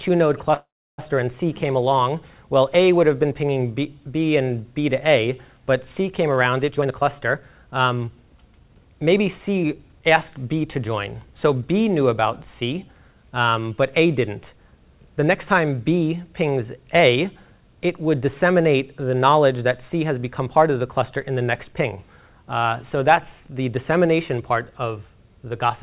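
A call audio freeze runs from 0.54 to 1.0 s. The audio stalls, a brief trailing continuation of the last sound fades out, and about 0.32 s of that stretch is silent before playback resumes where it left off. Nothing is lost; a gap of about 0.44 s has been inserted instead. The likely cause is packets held up in transit, letting the jitter buffer run dry until they arrived. A jitter buffer speed-up follows from 6.69 to 10.07 s. Playback runs at about 113% speed with unchanged pitch, so the passage sounds hurried. The receiver was trimming the backlog it had built up by cutting many short pitch-period-length pieces in succession, removing roughly 0.4 s in total. Throughout, the band stops at 4 kHz, which fits a narrowband 64 kbps G.711 A-law call codec.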